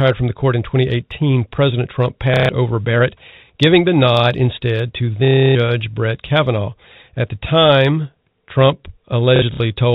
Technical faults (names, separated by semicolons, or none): packet loss with last packet repeated